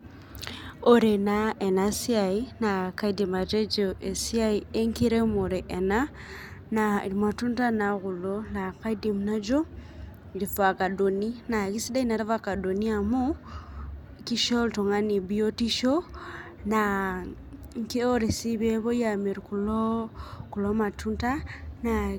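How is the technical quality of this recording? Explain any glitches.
Nothing in this recording catches the ear as a glitch, so there's really nothing here to explain.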